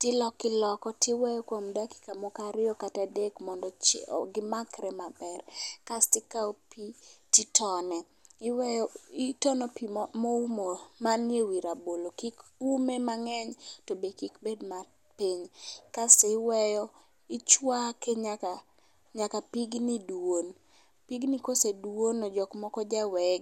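From about 0.12 s right through to 23.38 s there's a steady run of clock slip clicks, roughly every 40 ms, so they blur into a soft rattle rather than separate ticks, riding on the louder parts and dropping out in the gaps. Each one is a single sample skipped or doubled. That likely comes from two devices free-running on separate clocks with nothing syncing them, drifting apart by something like 500 ppm.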